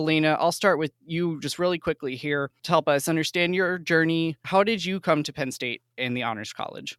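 No faults are audible anywhere in this speech recording.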